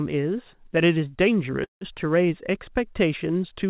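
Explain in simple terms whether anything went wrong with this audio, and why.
At about 1.64 seconds the speech stops for roughly a fifth of a second, until 1.84 s. This is a call audio freeze. The sound likely stalled because network packets were held up and the receiving buffer ran dry. The call filled the gap with a short fading buzz or hiss, then about 140 ms of near silence. When the audio resumes, nothing has been lost. It simply runs 170 ms late. The whole call sounds narrow, with nothing above 4 kHz, as phone-quality audio does.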